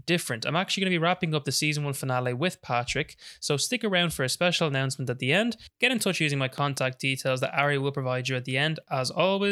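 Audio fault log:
6.58–6.80 s, loud pop: after "in touch using my", two pops about 10 dB over speech, likely a voltage spike; tall waveform spikes, vertical spectrogram lines.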